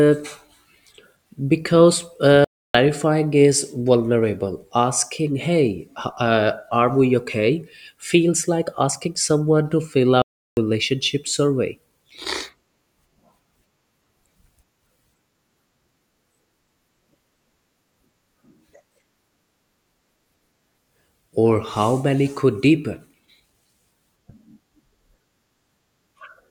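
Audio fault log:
2.45–2.75 s and 10.22–10.57 s: playback stall. The speech just drops out mid-flow for 0.30 s and then 0.35 s of dead silence before carrying on. That's likely the player running dry on data or its thread getting blocked until it caught up.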